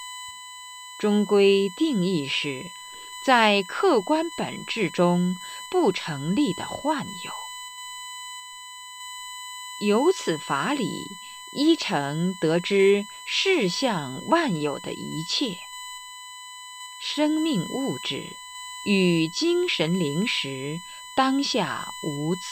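From the first second to the last, there's a steady, fixed-pitch tone sitting at 1 kHz under the speech, and it's plenty loud, roughly 15 dB below the talking. That's USB whine. The bus pulls current in bursts every millisecond, once per 1 ms frame, and that rhythm is leaking through the power or ground into the audio path, so you hear the frame rate itself as a thin, piercing whistle.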